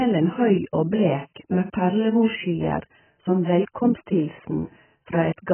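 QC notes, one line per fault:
throughout: AAC compression. Nothing reaches above 3.1 kHz, and the heavy damage leaves the speech dull, smeared and warbly, with fizzy sibilants. This is likely AAC-LC at a very low bitrate, around 10 kbps, where the encoder lowers its cut-off and starves the remaining bands.
1.34 s: pre-echo. A short hiss of about 17 ms comes just before "med perlemorsskyer som", and the onset sounds softened. The attack falls late in a transform block, so quantisation noise sized for the loud part spreads back into the quiet moment ahead of it.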